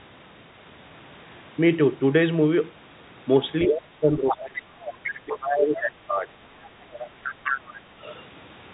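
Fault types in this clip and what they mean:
Other side's voice leaking through: A second voice appears at 3.62 to 3.77 s, 4.29 to 4.36 s, 4.85 to 5.58 s and 6.92 to 7.74 s, only slightly quieter than the main talker. The likely cause is a loudspeaker on the talker's end replaying the far party into the microphone, with the echo canceller failing to subtract all of it. Short scraps come first, then longer stretches.
Speech suppressed in double talk: From 3.66 to 4.96 s and again from 5.25 to 6.31 s, the main talker's level sinks while the second voice is present. The first span drops by roughly 25 dB at its deepest, and the second by about 15 dB. This likely happens because the echo canceller, facing both voices at once, cannot tell its own talker from the loudspeaker echo and attenuates everything together.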